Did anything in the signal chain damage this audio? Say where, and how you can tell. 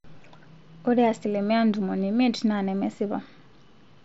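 No, nothing in the chain damaged it: the speech arrives through a Bluetooth mSBC headset link, band-limited at 8 kHz as that wideband codec always is, with no fault at any stage.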